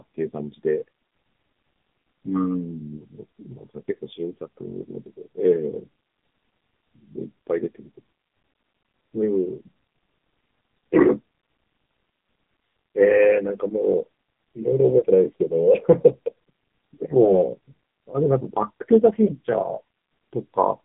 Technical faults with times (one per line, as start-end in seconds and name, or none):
0.00-20.84 AMR narrowband mobile codec
15.00-15.04 lost AMR speech frames
17.24-17.40 lost AMR speech frames
19.26-19.33 lost AMR speech frames